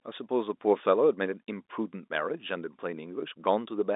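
Nothing here counts as a fault: the speech simply carries the narrow, boxy band of an ordinary G.711 telephone line, with nothing above about 3.8 kHz, just as that format should sound.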